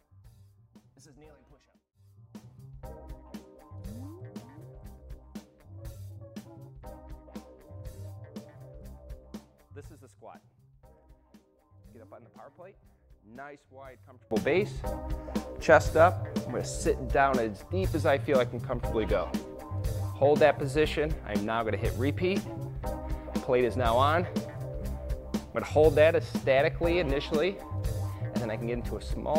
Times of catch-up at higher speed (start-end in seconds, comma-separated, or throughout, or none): none